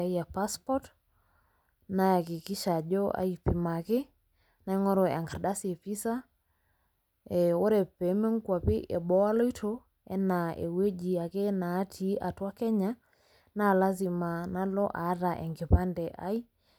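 No technical faults can be heard anywhere in the recording, and the signal stays steady and continuous throughout the speech.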